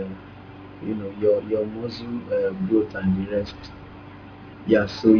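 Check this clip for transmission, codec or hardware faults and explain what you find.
Aliasing runs through the whole speech clip. The band stops abruptly at 5.5 kHz, which points to the audio being resampled from 44.1 kHz down to about 11 kHz with no low-pass filter first. Everything above that fold point reflects back downward to unrelated frequencies, so sibilants sound gritty and metallic, with folded energy roughly 25 dB under the speech. On a spectrogram, energy runs hard to the 5.5 kHz edge, with mirrored, downward-sloping traces where rising components should be.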